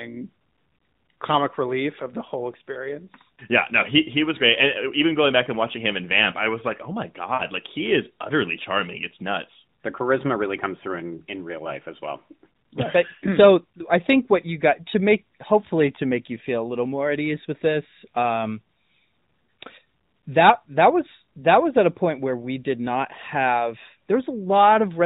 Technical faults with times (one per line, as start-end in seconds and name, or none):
7.34-7.44 lost AMR speech frames